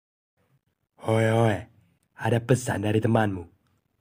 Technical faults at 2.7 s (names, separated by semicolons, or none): none